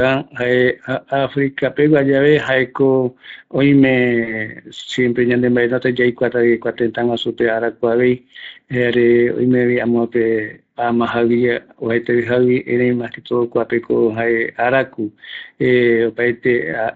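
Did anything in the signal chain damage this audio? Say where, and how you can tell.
Yes. The codec stage shows Speex codec damage throughout this speech: a hoarse, grainy, noise-like texture on voiced sounds. That points to a mid-rate Speex setting around 20 kbps, where CELP excitation is coarsely quantised. Unlike transform-codec artefacts, there is no swirling or pre-echo, just rasp.

At the network stage, VoIP packet loss concealed by the speech codec appears from 4.23 to 4.36 s, just before "siempre yande". The sound smears into a buzzy tone or coloured noise that fades, matching about 40 ms of missing audio, roughly two frames. A plain dropout would be silence or a click instead.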